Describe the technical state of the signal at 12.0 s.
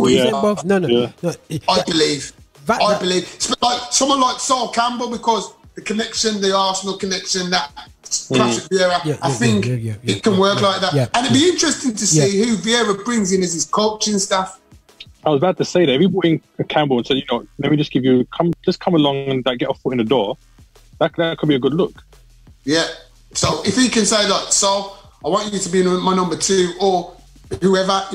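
At 12.00 s a jump with no silent gap, unlike a dropout, is likely a dropped buffer (overrun) that skipped a few overwritten milliseconds.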